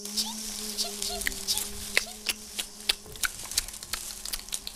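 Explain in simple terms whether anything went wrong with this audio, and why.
Nothing went wrong with this audio. Listening all the way through, no moment stands out as a technical problem that needs explaining.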